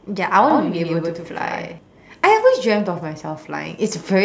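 From 0.50 s to 1.78 s the speech has a doubled audio track: a second full-band copy trails about a tenth of a second behind, roughly 5 dB quieter, likely from a slower capture path. Unlike a room echo, it has no decay or room colour and switches on and off abruptly.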